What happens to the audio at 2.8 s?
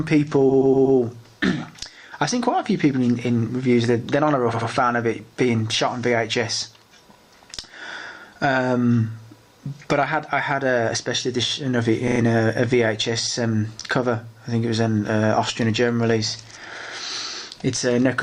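Nothing goes wrong at 2.8 s; the audio carries straight through that moment with no dropout, click, distortion or other fault.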